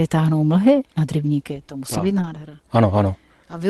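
Speech carried over an Opus call path, band-limited to about 12 kHz, with a lost packet rebuilt from error correction between 1.93 and 2.35 s, right after "nad rybníky to musí". Packets lost in that span were replaced by the low-bitrate redundant copies carried in the following packets, so no gap opens. The roughly 220 ms of rebuilt audio sounds coarser and noisier than the surrounding 24 kbps stream.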